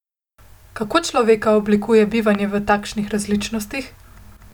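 At 2.35 to 2.37 s, between "človeka oblikuje" and "v takšnih", a single loud pop, likely a voltage glitch, spikes roughly 10 dB above the speech as a sharp waveform spike and a full-height vertical spectrogram stripe.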